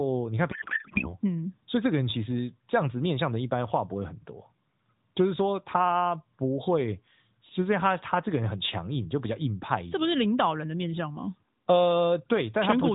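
From 0.52 to 1.16 s the speech dissolves into garbled warble that barely tracks it: a codec payload misread, with octet-aligned AMR frames unpacked as bandwidth-efficient.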